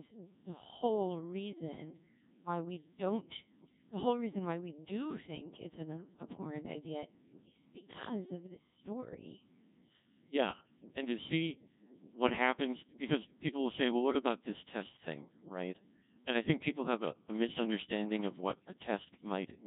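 Speech that sounds robotic and buzzy from start to finish, the signature of the Codec 2 vocoder. The damage is heavy and points to a very low rate, around 1.6 kbit/s. Instead of carrying the waveform, the codec sends only pitch, voicing, energy and a coarse spectral envelope, and the decoder rebuilds the voice from sine waves. That resynthesis is what separates it from a starved waveform codec like low-rate MP3 or Opus, which smears and warbles the real signal.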